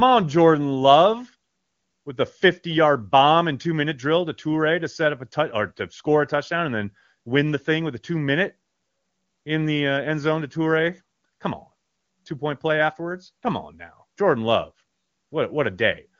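No technical faults are audible.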